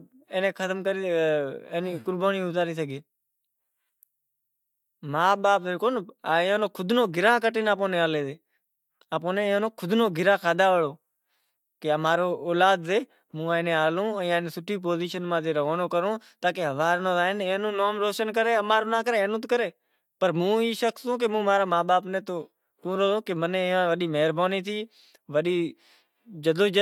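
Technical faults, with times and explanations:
No technical faults are audible anywhere in the speech recording.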